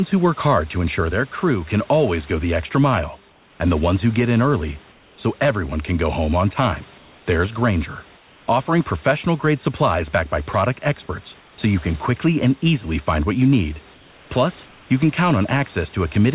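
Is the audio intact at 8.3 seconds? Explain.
No. From 8.16 to 8.48 s the real background gives way to a steady, featureless hiss about 3 dB quieter. This is likely comfort noise in place of the background. The sender paused transmission and the receiver filled the gap with synthetic shaped noise.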